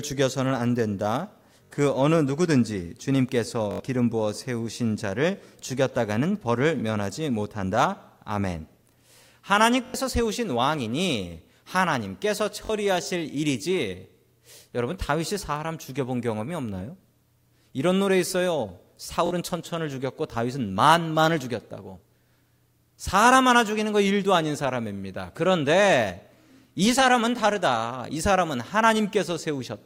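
The playback device repeatedly ran short of fresh audio and replayed its last buffer, a repeated buffer fault, at 1.64, 3.71, 9.86, 12.65 and 19.26 s. Each repeat is a slice of about 21 ms, which fits a 1024-sample buffer, looped two to four extra times with hard joins. The speech briefly catches in a stuttering buzz, longest at 3.71 and 9.86 s, and around a tenth of a second of audio goes missing there.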